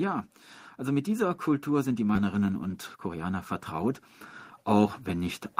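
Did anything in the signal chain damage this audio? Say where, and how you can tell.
Yes. Call processing shows an automatic gain rising from 0.78 s to 3.52 s: the level of the speech and the background climbs together by about 7 dB over nearly three seconds. That shared, gradual swell is the signature of an AGC deciding the input was too quiet and ramping its gain up slowly, rather than the talker getting louder, since the noise floor rises in step with the speech.

At the network and jitter buffer stage there is a skip ahead at 2.15 s. Playback jumps forward with no gap and no fill, and the two sides are spliced almost directly. Judging by the discontinuity, roughly 0.7 s of speech is missing. That points to a stretch dropped in transit or discarded by an overflowing buffer while later packets were already queued, so the receiver simply resumed from the newer audio.

The jitter buffer speed-up runs from 2.73 s to 3.25 s, just after the skip. 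The speech plays about 9% fast at unchanged pitch, so it sounds briefly hurried. Around 50 ms was trimmed in total, in short pitch-period-sized pieces removed repeatedly. That is the receiver working down an excess buffer depth to reduce latency, consistent with packets having arrived in a burst after a delay.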